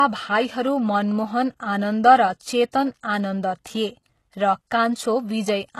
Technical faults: HE-AAC compression; pre-echo

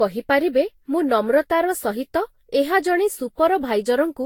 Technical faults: generation loss

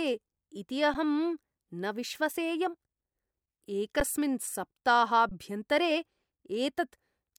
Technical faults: underrun with held sample

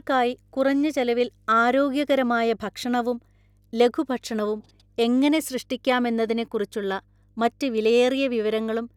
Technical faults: mains hum

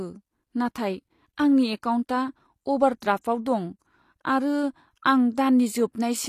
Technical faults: HE-AAC compression

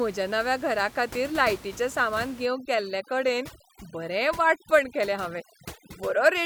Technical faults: overdone noise removal

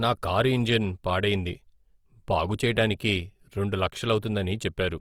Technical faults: Opus compression

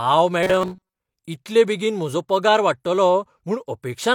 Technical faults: robotic sound from repeated short buffers

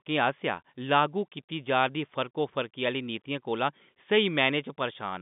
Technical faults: none

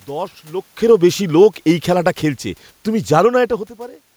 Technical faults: automatic gain falling

